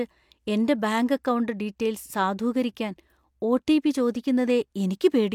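No technical faults can be heard anywhere in this recording.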